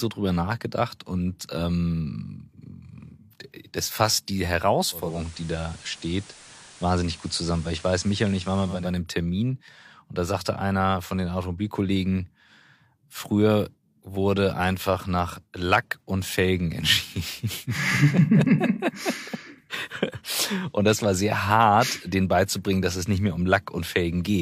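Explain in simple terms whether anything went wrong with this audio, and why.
Between 4.91 and 8.97 seconds, just after "das fasst die", the radio lost its digital signal and switched over to the ordinary FM broadcast of the same station, a fault called digital radio blending to analogue. Each switch fades across in about a third of a second. During that stretch a hiss sits under the speech, while the loudness stays the same.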